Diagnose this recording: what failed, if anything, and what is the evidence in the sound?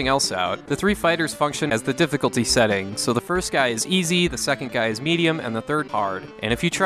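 Codec stage: brief glitches at 1.69–1.71 s and 5.87–5.90 s, each about one 26 ms frame; likely a broken MP3 bit reservoir, decoding another frame's bytes after lost frames.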